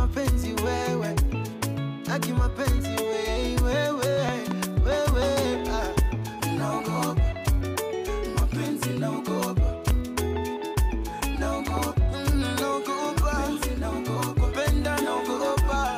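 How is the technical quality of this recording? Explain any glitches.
The recording is marred by loud pops: a double pop at 4.29–4.53 s, single pops at 5.99–6.01 s and 9.91–9.93 s, and another double at 11.67–11.79 s. Each pop jumps far above the sound, though the one near 9.9 s is somewhat weaker, while the audio continues beneath. The likely cause is a voltage spike from a plug, switch or static, which the following circuitry shapes into a sharp thump. On a waveform each pop appears as a tall, narrow spike, and on a spectrogram as a thin vertical broadband stripe.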